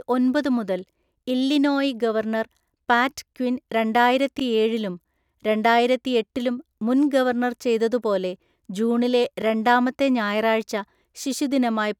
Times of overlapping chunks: 4.39-4.42, 9.42-9.44

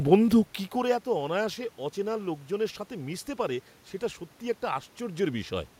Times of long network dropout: none

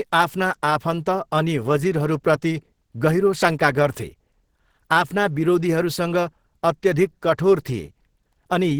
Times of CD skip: none

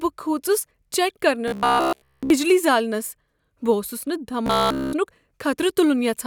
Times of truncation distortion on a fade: none

